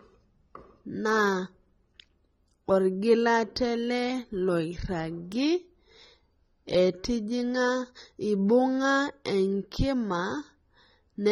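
Low-bitrate AAC compression is the likely cause of the damage heard throughout this speech recording. Its sparse, smeared spectrum fits an AAC-LC encode at around 24 kbps, which leaves the sound dull and plainly degraded, with warbling texture and nothing above 17.9 kHz.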